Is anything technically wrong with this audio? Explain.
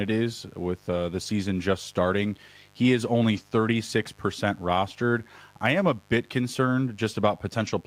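Yes. A mains buzz runs under the speech for the whole clip. It is built on a 50 Hz supply: something like a dimmer, a rectifier or an unshielded run is coupling sharp switching spikes into the signal twice per cycle, so the interference is a dense stack of 50 Hz harmonics climbing well into the kilohertz range. It sits roughly 35 dB below the speech and is heard as a steady, raspy buzz.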